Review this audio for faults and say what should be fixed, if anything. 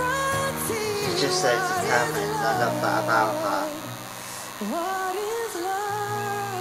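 DECT cordless phone buzz runs throughout, a thin 100 Hz buzz fairly close under the sound. Radio bursts every 10 ms are rectified. Keep DECT handsets and bases away from the recording chain.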